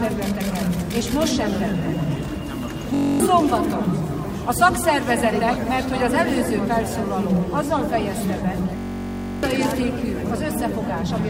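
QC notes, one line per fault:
2.94–3.20 s and 8.77–9.43 s, system hang loop: the system stalled while the output kept replaying one 21.33 ms slice of its ring buffer, which fits a 1024-sample buffer. Each freeze becomes a steady buzz near 46.9 Hz, and roughly 0.3 s and 0.7 s of audio go missing.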